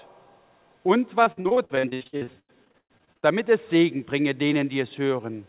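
From 1.24 to 3.25 s there's repeated packet loss, giving that robotic sound. Dropouts keep arriving in quick succession, the longest about 116 ms, and each is papered over by stretching the last bit of audio, so nearly half the stretch is patched-in filler with a choppy edge. Throughout, nothing sits above 4 kHz, which points to a narrowband call codec such as G.711.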